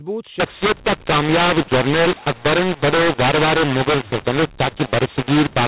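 From 0.40 s to the end, the A-law telephone stream is decoded as mu-law, scrambling levels into harsh distortion, unlike clipping, and pauses fill with hiss instead of silence.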